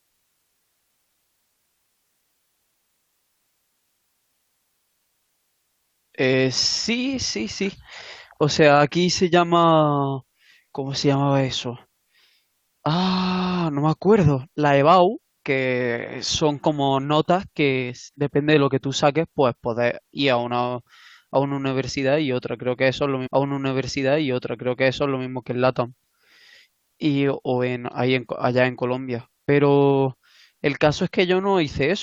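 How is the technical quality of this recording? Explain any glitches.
The recording has one clear playback fault in this speech clip, a stream segment repeated. From 23.26 s to 25.25 s, about 2.0 s of speech plays a second time, so the recording runs roughly two seconds longer than the original. The player fetched or queued the same stretch of the stream twice and played both copies in sequence. It sounds like a sudden jump back in the programme, with a small blip at the splice before the repeated section begins.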